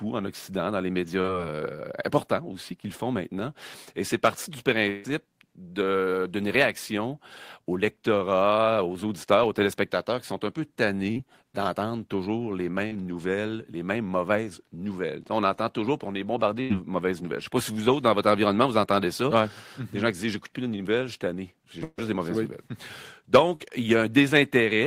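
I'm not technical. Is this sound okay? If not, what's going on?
No. Twice, a burst of packet loss dropped about a seventh of a second of the call, at 4.90 to 5.06 s and 21.84 to 22.00 s. The receiver stretched the last sound into a fading buzz or hiss, then skipped ahead. The second gap ends in brief silence just before "des mauvaises nouvelles".

There is also a short concealed packet loss at 23.56 to 23.62 s: about 40 ms arrived too late, and the receiver patched the hole with an imitation of the preceding sound, heard as a quick smear or wobble.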